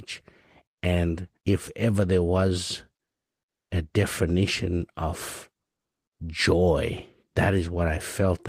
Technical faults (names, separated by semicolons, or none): comfort noise in place of the background